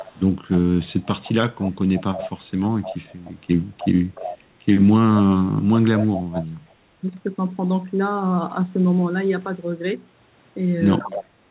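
A loudspeaker on one end of the call was likely feeding its own microphone, and the echo canceller there let part of that pickup through, so the speech comes back about 0.3 s late as an echo leak. The copy sits about 20 dB down at 0.0–0.2 s, about 15 dB down at 0.51–2.44, 2.81–3.31 and 3.78–4.38 s, and about 10 dB down at 5.99–6.73 and 11.11–11.26 s. It trails the speech in those spans, muffled like the rest of the band, which stops near 4 kHz.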